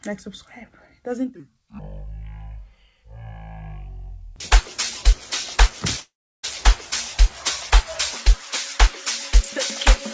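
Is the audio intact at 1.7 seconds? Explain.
Yes, the audio is intact at 1.7 seconds, passing through the call path as expected, with nothing above 8 kHz, which fits a G.722 wideband codec.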